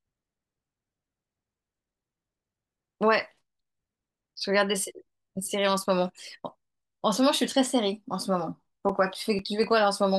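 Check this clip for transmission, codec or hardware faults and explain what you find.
There's one fault here, right near the end of the speech: CD scratch ticks, six of them between 8.40 and 9.64 s. That's a steady ticking of roughly five a second, each tick no more than a few milliseconds long. It happens when a blemish on the disc wipes out more data than error correction can rebuild, once per revolution, so the player patches or mutes those samples and you hear a small regular click each time.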